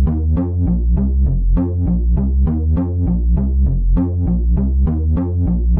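No technical faults are audible anywhere in this recording of sounds.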